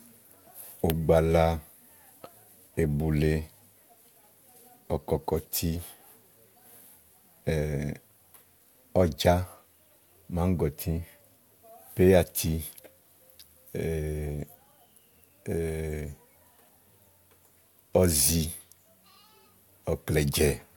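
Nothing here gives away a technical problem; the speech runs along steadily with no dropouts, glitches or other disturbances to pick out at any point.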